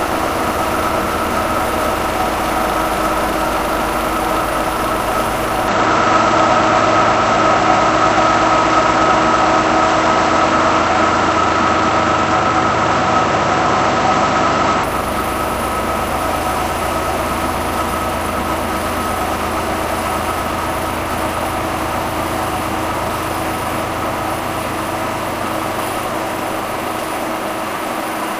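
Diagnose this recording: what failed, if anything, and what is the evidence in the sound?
The capture input likely switched to a poorer device at the driver level from 5.68 s to 14.84 s. Across that span the sound turns dull, with nothing above 7.9 kHz, a modest level shift, and faint new background noise, then clears again with no gap at either switch.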